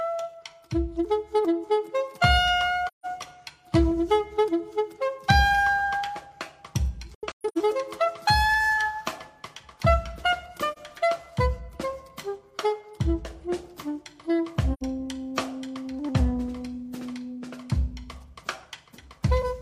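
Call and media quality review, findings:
AAC frame loss with muting, 2.87–3.06 s: soft-edged dropout of about 0.17 s, fade out then fade in. The decoder zeroed the missing spectra, and window overlap smoothed the edges. The length fits four lost frames of about 43 ms.

AAC frame loss with muting, 7.15–7.58 s: a cluster of muted holes scattered over about 0.43 s, the longest run roughly 0.15 s. About 0.3 s goes silent in total, consistent with seven lost frames. Each hole fades in and out across the overlapping windows.

AAC frame loss with muting, 10.72 s: brief soft gap of about 43 ms, a single zeroed frame. The overlap-add crossfade rounds off both edges.

AAC frame loss with muting, 14.73–14.83 s: muted gap of about 85 ms with gentle fades. This fits two lost frames with their spectra set to zero by the decoder.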